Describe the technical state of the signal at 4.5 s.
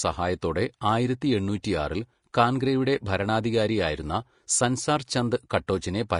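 At 4.5 s the speech sounds hissy and grainy, with a roughened edge on tonal parts and softened attacks, and nothing reaches above about 10.5 kHz. This runs through the whole clip. The likely cause is Vorbis compression at low quality: the encoder trims the top band and quantises the remaining treble residue so coarsely that fine detail turns into noise of similar energy. The damage is plainly audible and fits a bitrate near 38 kbps.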